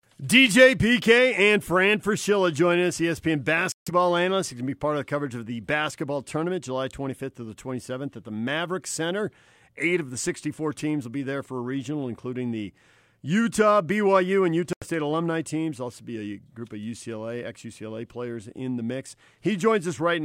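Speech clip with two brief gaps where the audio drops to clean silence, at 3.72 to 3.91 s (about 145 ms silent) and 14.73 to 14.85 s (about 87 ms) just before "alumni teams". This is likely a Bluetooth stall. Unlike codec packet loss, the gaps are true silence rather than warbled or repeated fragments.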